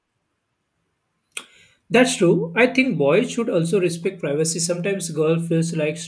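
No technical faults are audible.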